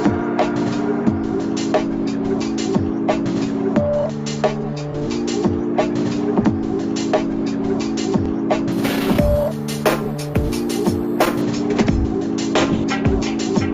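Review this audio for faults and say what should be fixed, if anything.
From 8.72 s to 11.42 s there is imaging from sample-and-hold upsampling. The audio was raised from 16 kHz to 44.1 kHz by repeating each sample, with no smoothing filter afterwards. That stepped waveform mirrors the spectrum around multiples of 16 kHz. The first copy fills 8 kHz to 16 kHz, about 22 dB below the signal. It sounds like a bright metallic fizz that follows the sound's level. To prevent it, resample with a proper interpolating low-pass filter.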